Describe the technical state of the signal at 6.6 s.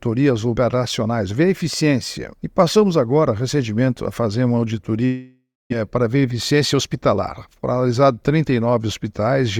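At 6.6 s a jitter buffer speed-up is under way, running from 6.32 to 7.14 s. The receiver trims short pitch-period pieces repeatedly to drain excess buffered audio. Playback runs at 105% speed with unchanged pitch, losing about 50 ms and sounding slightly hurried.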